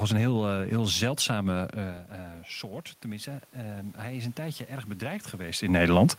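From 3.03 to 6.08 s, automatic gain rising: input fell about 13 dB, so gain crept up about 6 dB, lifting voice and room noise.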